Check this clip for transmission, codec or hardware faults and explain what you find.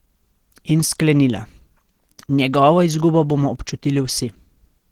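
One codec fault runs through the whole clip. The speech has the sound of Opus compression, present from start to end. It is likely a low-rate Opus stream. The damage is plainly audible, and the sound points to a rate around 16 kbps. At that rate the encoder runs in its hybrid speech mode. Bits run short, so missing detail is filled in rather than left as gaps. The speech sounds muffled and hoarse, with a rough, grainy texture.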